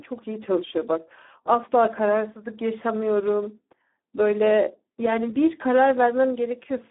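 From start to finish the speech carries Speex codec damage, and it is heavy. The sound is hoarse and noisy, edging toward robotic. Too few bits reach the excitation signal, so the codec rebuilds the voice from a coarse, noisy excitation. That fits a low setting near 8 kbps. The band runs from about 250 Hz to 3.6 kHz, like a phone line. Nothing is present above 3.8 kHz.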